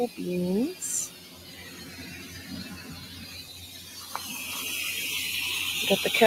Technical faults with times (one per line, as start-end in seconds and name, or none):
0.00-6.26 noise suppressor applied to music or sounds
1.08-1.82 sound cut by the noise suppressor
3.47-3.96 sound cut by the noise suppressor